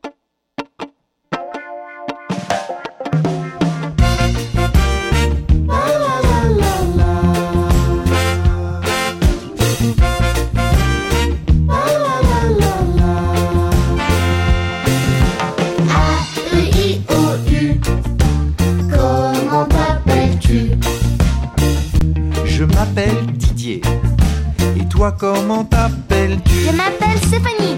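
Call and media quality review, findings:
Underrun with held sample, 21.99–22.01 s: output buffer ran dry for about 23 ms, a 1024-sample gap. Waveform flat; about 20 ms of audio lost.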